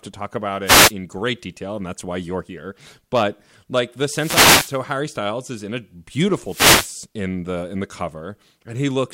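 At 0.65 to 0.92 s, 4.08 to 4.81 s and 6.43 to 6.98 s, wireless microphone noise hits break through as swishing static bursts over the speech. Each is an FM radio fade, where receiver hiss rises. On a spectrogram each shows as a broadband noise smear.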